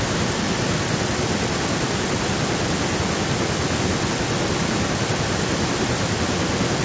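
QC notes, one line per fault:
Throughout, echo leak: speech repeats 0.91 s later, only slightly quieter, likely loudspeaker sound slipping past the other side's echo canceller and sent back.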